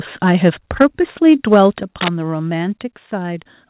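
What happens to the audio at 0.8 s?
Right at 0.8 s the speech starts breaking up. Through to about 0.86 s the loudest part is squared off and gritty, with a harsh crackle riding on it. That's microphone overload: the peaks push roughly 4 dB past the converter's limit, so a good chunk of the waveform, something like a sixth of the samples, gets its tops flattened. The likely cause is an input gain set too hot for the converter.

Then at 0.82 s, still inside that distorted burst, the whole level drops by about 3 dB in one step, and the background sinks along with the speech. That's the microphone volume stepped down, most plausibly the call software reacting to the clipping by pulling the device's input gain back. It lands mid-distortion, so the burst is still crunchy after the drop. The audio has the narrowband telephone sound of the call path, with nothing above 4 kHz.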